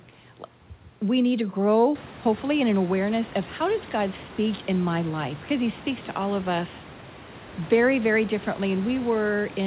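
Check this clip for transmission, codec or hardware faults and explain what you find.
No faults found.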